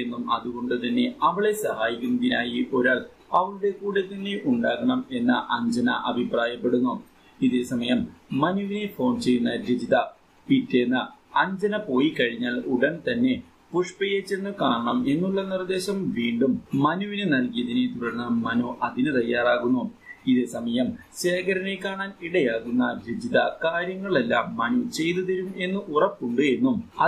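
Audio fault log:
No fault is logged for this clip.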